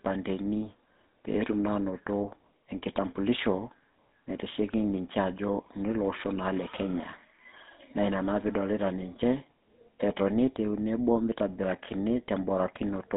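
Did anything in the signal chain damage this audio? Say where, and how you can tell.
Yes, at the codec stage, throughout the clip: the speech has been through the GSM full-rate codec. Nothing reaches above about 3.8 kHz, and the line band runs roughly 200 Hz to 3.7 kHz. The plainly audible buzzy, gravelly roughness fits a codec near 13 kbps that models the vocal tract and rebuilds the excitation from a sparse train of regular pulses, discarding most of its fine detail.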